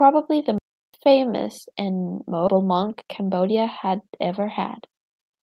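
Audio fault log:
0.58 to 0.94 s, playback stall: the speech cuts out in mid-flow and the output sits silent for about 355 ms before carrying on with "famous and". A gap this long with nothing filled in points to the player likely running dry of data or having its output thread held up, so no samples reached the device until it caught up.
2.47 to 2.49 s, skip ahead: right after "famous and" the audio jumps forward with no gap and nothing filled in, so roughly 0.7 s of speech is simply missing and the two sides butt together almost directly. Later audio was already queued, and the dropped stretch was discarded rather than played late, which shortens the delay by around 0.7 s and leaves an abrupt splice instead of a pause.
2.57 to 4.27 s, jitter buffer speed-up: the speech runs about 8% fast while its pitch stays put, giving a slightly hurried, clipped delivery across this stretch. The receiver was holding more audio than it aims for and trimmed it back by cutting many short pieces, each one or a few pitch periods long, out in succession. 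Together they remove roughly 150 ms, which tightens the timing without any step in pitch.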